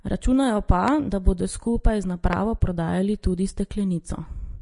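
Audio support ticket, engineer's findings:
Vorbis compression, whole clip: grainy, hissy treble, roughened tones, smeared attacks, plainly audible. Nothing above 10.6 kHz. Likely a low-bitrate Vorbis encode, sounds around 34 kbps, with the treble quantised so coarsely that detail turns into noise and the cut-off pulled down.

Loud pop, twice: 0.88–0.90 s and 2.33–2.35 s, each a single sharp pop roughly 15 dB over the speech, which keeps going underneath. Likely a voltage step or spike from a plug, switch, static or driver glitch added to the signal.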